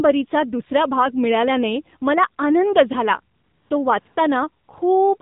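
The speech runs through the AMR narrowband mobile codec for its whole length. Nothing passes above 4 kHz, and the thin, buzzy, synthetic timbre fits a low mode of about 7.4 kbps. AMR comfort noise appears at 3.36–3.70 s, 4.00–4.06 s, 4.08–4.16 s and 4.64–4.68 s. In these gaps the sender stopped sending speech frames, and the receiver filled them with a steady, smooth synthetic hiss that switches abruptly in and out.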